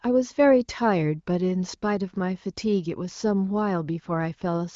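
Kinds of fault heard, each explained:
No faults are heard in this speech clip. It has passed through an AMR wideband (HD Voice) codec, with nothing above about 7.5 kHz and only faint coding roughness at most, which fits a higher-rate mode of around 18.25 kbit/s.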